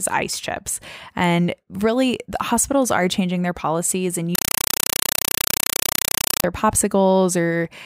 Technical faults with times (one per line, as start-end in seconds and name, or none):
4.35-6.44 compressed stream played as audio